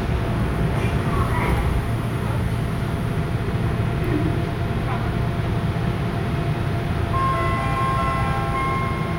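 No technical faults can be heard anywhere in this recording. The sound continues without any break or audible damage.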